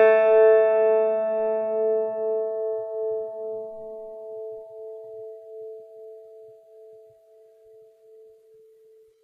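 Right from the start and all the way through, this music carries plainly audible HE-AAC compression damage. The top end is synthetic, rebuilt from copied lower bands, so cymbal-like detail turns gritty and metallic, and nothing sits above 14.9 kHz. That fits a likely low-bitrate stream around 20 kbps.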